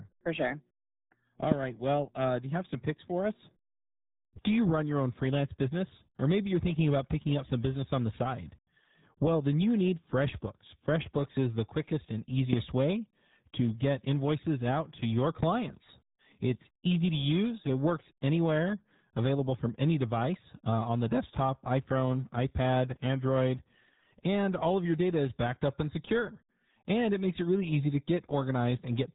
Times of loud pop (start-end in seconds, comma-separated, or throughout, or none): 1.52-1.54, 12.53-12.55